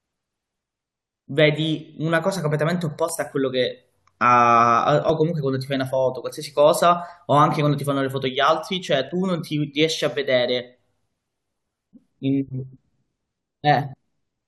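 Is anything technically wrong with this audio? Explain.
Yes. The speech has an overlap between stream segments, heard at 5.09 s and 9.09 s. Adjacent stream segments, about 2 s long, carried timestamps that overlapped, so the player trimmed away roughly 12 to 13 ms of sound it wrongly treated as duplicated. At each point the waveform jumps straight from one sample to a later one, producing a short click or tiny skip in the speech. The two events fall 4 s apart, matching two segment lengths.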